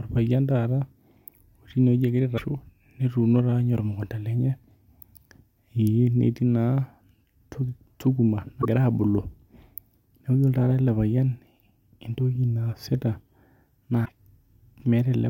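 At 2.34 to 2.40 s, 8.58 to 8.65 s and 14.02 to 14.09 s the speech breaks into a short glitch, each about 60 to 70 ms long. This is damaged data in a compressed stream: corrupted bytes make the decoder misread those frames and lose sync until it finds the next frame header. Each break comes through as a chirp, squawk, click or short hole, usually with the speech jumping ahead.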